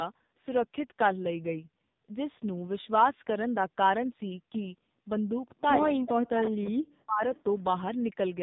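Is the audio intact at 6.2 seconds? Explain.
No. From 6.04 to 6.64 s the speech drops sharply, roughly 40 dB at its deepest, and partly vanishes. That's speech suppressed in double talk, likely caused by an echo canceller that heard both sides at once and turned the near talker down with the echo.

Underneath that, the AMR narrowband mobile codec is at work. Nothing gets through above 4 kHz, and the voice sounds heavily buzzy and synthetic, which fits a low bitrate mode around 6 kbps. At that rate the vocal-tract model and its few pulses per frame can't carry much detail.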